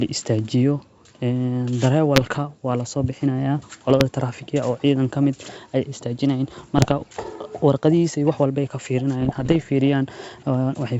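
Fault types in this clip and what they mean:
Bit errors on an ADPCM link: flipped bits knock the decoder's step size and predictor off, so each error rings on as pops and rough, level-jumping bursts. There are four between 2.16 and 9.57 s. Unlike packet loss, the sound never drops to silence.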